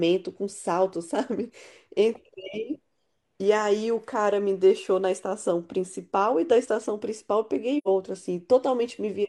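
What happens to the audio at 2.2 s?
Nothing goes wrong at 2.2 s: the speech runs through that moment intact, with no dropout, click, glitch or other audible fault.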